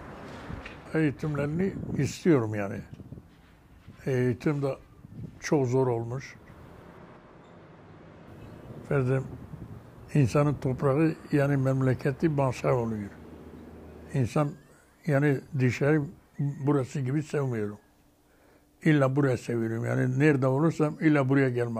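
No technical faults can be heard anywhere in this audio, so there are none to describe in time order.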